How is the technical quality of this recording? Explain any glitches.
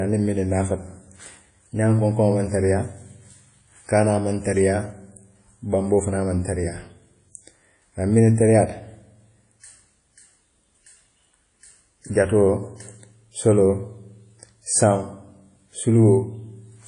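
The speech carries plainly audible codec damage throughout. It sounds ringing and washy, with a hiss that swells and fades with the voice, and nothing above about 10.1 kHz. This is likely WMA compression at a low bitrate, around 32 kbps. The long transform blocks smear quantisation noise over tens of milliseconds around each sound. Weak spectral detail is discarded and the top band is cut away.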